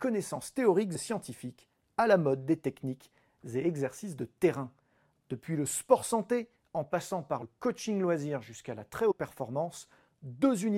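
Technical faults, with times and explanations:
0.94 s, 4.91 s, 7.41 s and 9.10–9.12 s: compressed frames skipped. The speech jumps forward just before "scientifiques à la mode", between "sport santé en passant" and "coaching loisir jusqu'à la", and just after "loisir jusqu'à la très", losing roughly 20 to 100 ms each time. Whole codec frames were missing or rejected, so playback resumes further on.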